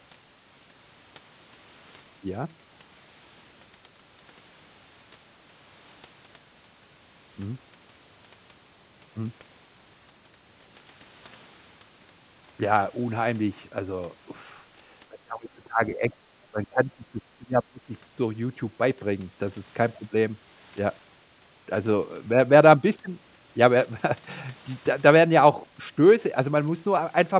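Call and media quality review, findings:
Speech suppressed in double talk: 15.09–16.13 s, 16.45–17.22 s, 17.38–17.92 s. Echo canceller likely unable to separate near talker from loudspeaker echo, attenuating both. Talker drops by about 20 dB, nearer 25 dB in the last span. Audio band-limited at 4 kHz throughout, consistent with a G.711 A-law call path.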